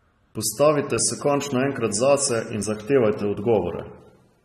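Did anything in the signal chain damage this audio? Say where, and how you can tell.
Yes, at the codec stage. The speech is dull and smeared throughout, with a fizzy, warbling edge on sibilants, likely from AAC compression at a bitrate that sounds near 32 kbps. A spectrogram shows a hard ceiling at 13.1 kHz.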